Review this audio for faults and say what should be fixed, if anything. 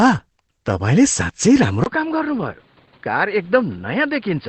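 Throughout the clip the speech sounds muffled and hoarse, with nothing above about 8.5 kHz. This is likely Opus compression running in its speech-oriented SILK mode at wideband. The encoder models the signal as a simple source-and-filter and drops the top octave, and the heavy damage fits a bitrate around 12 kbps, too low to keep detail. To prevent it, encode at a higher Opus bitrate so the codec keeps full band and finer detail.

At 1.84 s the sound cuts out for about 20 ms and comes back duller and boxier, staying that way to the end. Everything above about 4.9 kHz disappears, the level drops by roughly 10 dB, and a new noise floor appears, roughly 30 dB below the speech. The likely cause is the input switching to a poorer device, such as a headset in its call profile, with a narrower band and its own hiss. To prevent it, lock the recording input to one microphone and disable automatic device switching.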